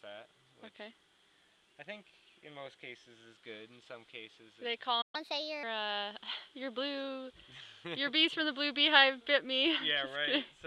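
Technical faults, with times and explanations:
5.01–5.15 s, playback stall: the sound cuts to silence for about 120 ms mid-flow, then resumes, likely because the player ran out of buffered data or its thread was blocked.
5.15–5.63 s, catch-up at higher speed: the audio runs fast and sharp, at 1.25 times normal speed and about four semitones higher, as the player resamples its backlog to recover lost time, then returns to normal.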